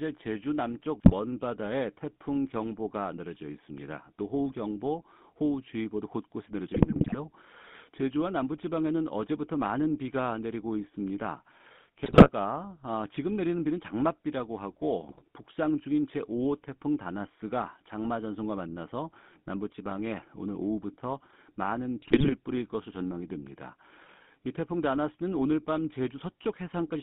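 The whole clip has the buzzy, gravelly grain of the GSM full-rate codec. The speech is rebuilt from a vocal-tract model driven by sparse pulses, and the band runs only from about 150 Hz to 3.6 kHz, which fits the old 13 kbit/s GSM coder.

On top of that there are GSM bit errors at 1.0–1.13 s, 6.74–7.17 s, 12.04–12.29 s, 15.04–15.22 s and 22.02–22.35 s. Corrupted filter, pitch and gain values briefly wreck the spectrum and level, so the speech breaks into squawks, pops and gargling.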